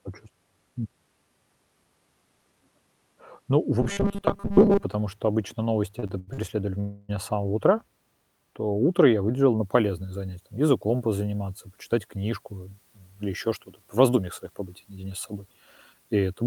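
From 3.82 to 4.84 s, just before "что обычно", new audio was likely reaching the playout too seldom, so a short stretch was looped over and over in place of the real signal. This is robotic sound from repeated short buffers. A rigid metallic buzz at 200 Hz, fitting a 5 ms repeat, replaces most of the speech.

Between 5.99 and 6.40 s, after "что обычно", packets kept arriving behind schedule and the jitter buffer emptied four times, producing repeated stalls (stutter). The receiver stretched the last sound through each wait, the longest 87 ms and 186 ms in total. That is nearly half the span, so the speech drags and catches while nothing is lost.

At 6.80 to 7.11 s, right before "с самого утра", delivery likely stalled outright and the buffer ran dry, giving a call audio freeze. The receiver carried the last sound on for 287 ms as a fading continuation without dropping to silence. Speech then resumes where it left off, 287 ms later.

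From 9.59 s to the end, pre-emphasis was left on: the treble boost of the CD 50/15 µs curve was applied with no matching de-emphasis. The top end sits about 8 dB high at 10 kHz relative to 1 kHz. The voice sounds thin, bright and sibilant.

Twice, the jitter buffer held more audio than its target, and the receiver trimmed pitch-period-sized pieces to shed delay. This is jitter buffer speed-up, running 11.92 to 13.49 s at 109% and 13.95 to 15.34 s at 107%. Around 150 ms and 100 ms are removed, so the speech sounds hurried at unchanged pitch.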